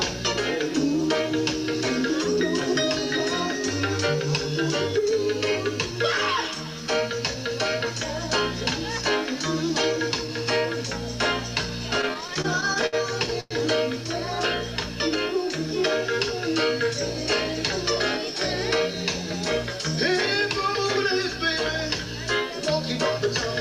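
From 12.01 to 13.52 s the audio suffers repeated stalls, a stutter. Packets reached the receiver late, or slower than playback needed, so its jitter buffer kept running dry. Sixteen short halts are audible across that stretch. At each one the last sound is held and continued, and the longer waits fade out. The longest is about 100 ms. Together they fill about 310 ms, a fifth of the span. Nothing is lost, but the sound drags and hiccups.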